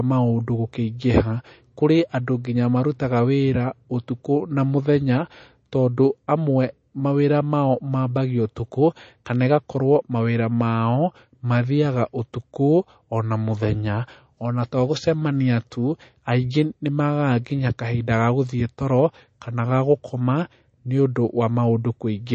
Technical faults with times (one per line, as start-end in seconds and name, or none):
0.00-22.35 MP3 compression